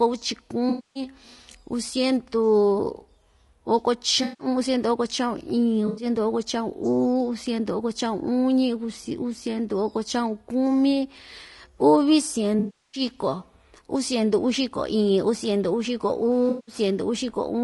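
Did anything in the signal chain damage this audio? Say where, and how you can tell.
Yes. Low-delay AAC compression runs throughout the clip, at the codec stage. The speech sounds rough and grainy, with noise filling the gaps between harmonics and a thin, synthetic top band. The likely cause is AAC-ELD's short frames resolving pitch poorly at a low bitrate, consistent with about 32 kbps.

AAC frame loss with concealment occurs at 0.69–1.03 s, 4.23–4.47 s, 5.87–6.05 s (just before "oko cha'un"), 12.59–13.01 s and 16.49–16.75 s, from a network or transport stage. Each patch is filled in because the decoder rebuilt the missing frames from the last good spectrum. The gaps last about 100 to 340 ms.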